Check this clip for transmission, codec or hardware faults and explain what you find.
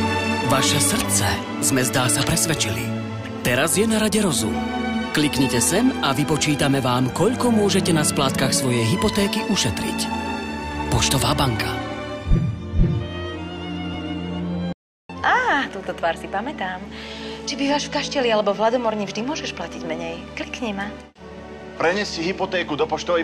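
One fault turns up, a playback stall. From 14.73 s to 15.10 s the sound stops mid-flow and the output falls silent for about 0.37 s before continuing. The likely cause is the player running out of buffered data or its thread being blocked. That third of a second is far longer than the tens-of-milliseconds gaps of a packet-loss dropout.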